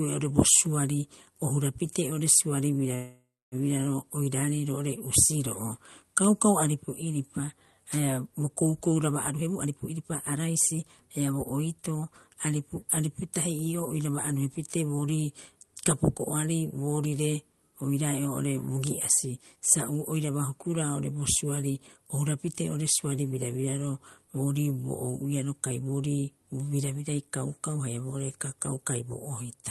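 At 2.95 s there's a call audio freeze lasting until about 3.55 s. The last bit of sound is stretched into a fading buzz that drops to silence for roughly 270 ms, likely because delayed packets drained the jitter buffer. Nothing is lost, but everything after lands about 565 ms late.

From 9.3 s to 12.03 s comes a jitter buffer speed-up. The receiver trims tiny pitch-period slices again and again to shed roughly half a second of backlog, so the speech rushes along at about 121% speed while keeping its normal pitch.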